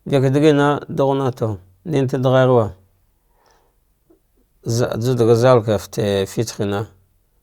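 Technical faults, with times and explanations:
No technical faults are present in this speech recording, and the signal holds steady without any disruption or defect.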